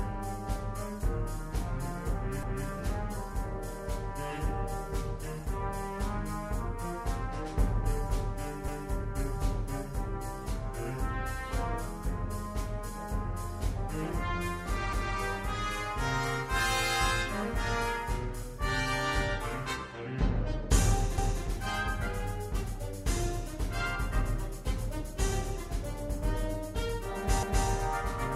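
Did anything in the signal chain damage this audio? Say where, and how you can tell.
Yes. A 250 ms stutter recurs at 2.43, 8.68, 14.93, 21.18 and 27.43 s. These are overlapping chunks at the buffer stage, where each 6 s block restarts too early and replays its join.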